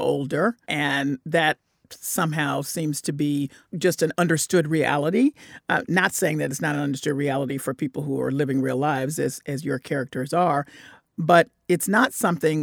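No dropouts, clicks, distortion or other transmission faults are audible anywhere in the recording.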